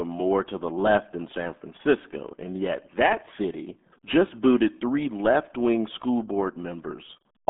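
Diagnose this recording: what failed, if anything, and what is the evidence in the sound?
The codec stage failed: the whole clip carries the sound of the RealAudio 14.4 codec. Nothing reaches above about 3.7 kHz, and the usable band sits roughly between 200 Hz and 3.5 kHz, so the speech is muffled. The heavy gargling comes from coarse coding, which fits an 8 kbit/s dial-up speech codec. A plain telephone band-limit or low-pass filter would narrow the band just as much but leave the speech clean, without the gargle.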